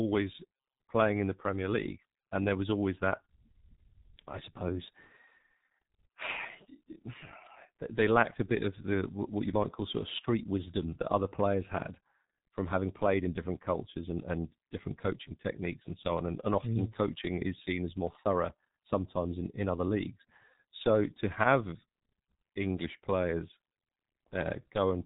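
From start to finish the speech has been through the G.723.1 codec, and heavily. Nothing gets past about 3.8 kHz, so it's muffled, and the slow-updating voice model leaves it hoarse with smeared consonants, which fits a bitrate around 6 kbit/s.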